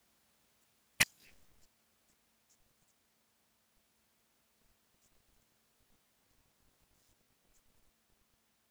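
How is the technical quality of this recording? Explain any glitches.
The recording is marred by processor overload crackle in two bursts, from 0.91 to 1.52 s and, longer, from 5.66 to 7.52 s. In both, the processor repeatedly fails to deliver short buffers on time, which fits buffers of around 10 ms, and each miss replays a scrap of old audio with hard edges. The speech sounds gritty and torn. A spectrogram shows dense vertical broadband streaks across both spans, and the waveform shows repeated fragments with abrupt steps at their joins.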